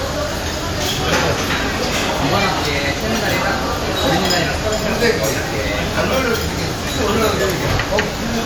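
Listening closely to this recording of everyday sounds, nothing stood out as a technical problem at any point.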